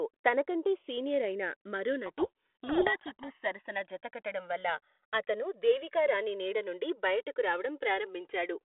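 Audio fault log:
Throughout: channels drifting apart. Summed to mono, the audio carries a slow flanging, with comb notches creeping steadily through the spectrum as the gap between the two channels grows to roughly 3 ms by the end. That fits two devices whose clocks differ by a few hundred parts per million. A fixed offset would give static coloration, and a flanger effect would sweep back and forth. Here the sweep only moves one way.
2.06 to 3.31 s: codec payload misread. For this stretch the speech is buried under harsh, gritty distortion. The decoder takes in frames that look valid, but the bits inside each G.726 code word are read in reversed order, so the sample differences come out wrong. The normal telephone-band G.726 coding, which sounds like 32 kbit/s, leaves only light damage elsewhere.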